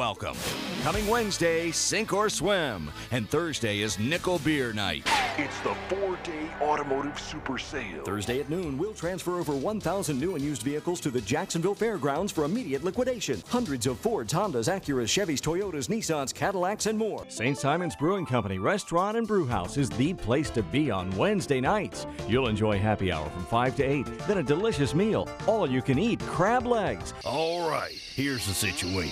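No technical faults are audible.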